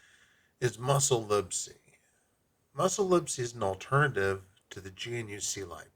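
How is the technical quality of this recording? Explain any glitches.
The technical quality of the recording is sound, with no glitches to explain.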